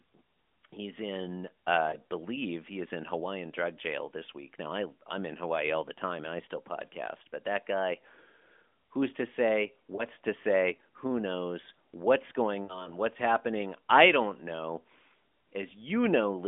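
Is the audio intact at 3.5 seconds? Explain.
Yes, at 3.5 seconds the speech runs on without a break or fault, heard through the narrow telephone band of the AMR narrowband mobile codec at 12.2 kbps.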